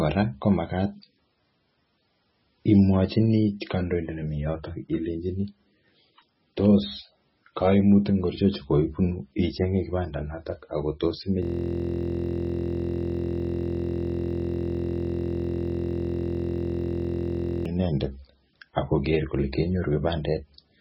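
From start to finish the speech is watery and swirly, with smeared consonant onsets and no content above 5.6 kHz, most likely from heavy MP3 compression at a very low bitrate around 16 kbps. A spectrogram shows a hard ceiling at 5.6 kHz and flickering, patchy holes below it.

From 11.43 s to 17.66 s a system hang loop replaces the speech with a steady buzz at 43.1 Hz. The same 23.22 ms fragment, which fits a 1024-sample buffer, repeats hundreds of times while the hardware cycles a frozen buffer. The waveform shows an identical repeating block, and the spectrogram shows evenly spaced harmonic lines.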